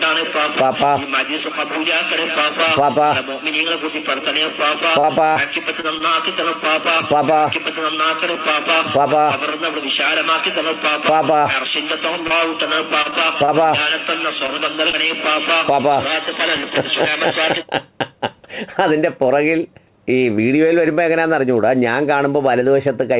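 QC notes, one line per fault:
5.0–6.03 s, repeated packet loss (robotic sound): Five short holes land within about a second. The longest is 32 ms, and about 90 ms is missing in total. Each hole is filled by stretching the previous sound, so 11% of the span is patched. It turns choppy.
12.27–15.12 s, scattered short gaps: Around seven brief holes are spread over three seconds, none longer than about 30 ms. The receiver continues the last sound across each one. Only about 5% is patched. The audio stays clear, with small ticks and hiccups over a band that stops at 4 kHz.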